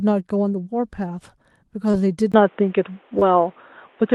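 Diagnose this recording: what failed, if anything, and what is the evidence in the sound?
Two short concealed packet losses show up on the network side, at 1.91–1.95 s and 3.19–3.23 s. Each is a quick smear lasting a few hundredths of a second. About 20 ms of audio didn't arrive in time, and the receiver covered the gap by extending what it last had, as pitched continuation or shaped noise, then crossfaded back into real audio.

From 2.32 s to the end the sound turns dull and boxy. It starts with a 20 ms dropout at the switch, and after that nothing comes through above 3.8 kHz. The level moves by roughly 5 dB, and a new noise floor appears about 35 dB down. Capture most likely flipped to a poorer input device mid-recording, such as another mic or a headset's call profile, bringing its narrower band, different gain and its own hiss.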